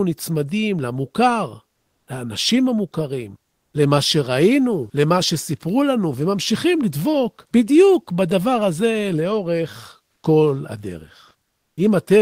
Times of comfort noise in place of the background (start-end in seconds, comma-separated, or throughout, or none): 11.47-11.77